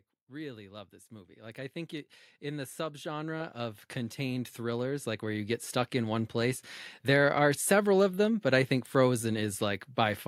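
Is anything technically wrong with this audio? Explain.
Yes. The speech clip has automatic gain rising twice. From 0.27 to 1.61 s the level climbs by about 6 dB, and from 2.39 to 6.35 s it climbs again, by about 14 dB. In both spans the automatic gain control judged the input too quiet and kept raising its gain over more than a second. Voice and background noise swell together. That common, gradual rise is what separates it from a talker simply getting louder or moving closer, which would lift the voice but not the room noise.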